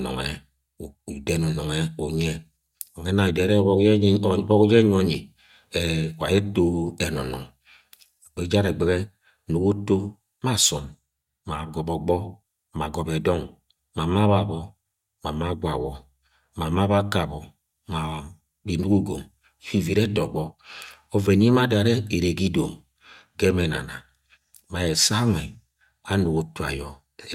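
No technical faults are audible.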